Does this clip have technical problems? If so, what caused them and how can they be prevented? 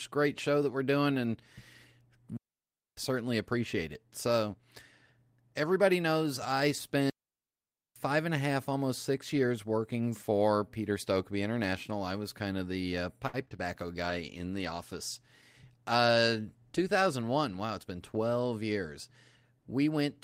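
Yes, there are four kinds of problem here.

Two digital wireless dropouts. The first runs from 2.37 to 2.97 s, a clean hole of about 0.6 s just before "certainly appreciate it". The second runs from 7.10 to 7.96 s, about 0.86 s, between "everybody knows I" and "and a half almost". Both times the wireless receiver lost too much of the data stream and simply muted. You get near silence with a quick fade and no noise burst on either side. To prevent it, keep the transmitter in clear line of sight, close to the receiver, and away from crowded RF.

Repeated packet loss, the robotic kind, shows up from 13.27 to 13.60 s, right after "kind of the uh". Within that third of a second, several packets went missing one after another, the longest gap about 61 ms. Each hole got patched by stretching the last bit of sound, so about a third of the stretch is concealment. That's why it sounds choppy, with bits missing. 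To prevent it, put the call on a stable wired connection or prioritise the audio traffic.

A call bitrate drop runs from 14.05 to 16.47 s. The bandwidth estimate fell and the encoder was pushed down to about half its rate, which fits a drop from 32 to 16 kbps. It sat at the lowest rate for about 1.2 s. With fewer bits, Opus codes more coarsely and the sound turns rough and duller before it recovers. To prevent it, free up upstream bandwidth so the estimate doesn't collapse.

A jitter buffer speed-up overlaps that, from 15.64 to 16.36 s. The receiver had built up more buffered audio than it wanted, probably after a bunch of late packets arrived together. To catch up, it snipped out tiny pitch-period-sized pieces over and over, around 70 ms in total. So the sound plays about 9% faster at the same pitch and feels a bit hurried. To prevent it, reduce network jitter so packets don't pile up and force the buffer to drain.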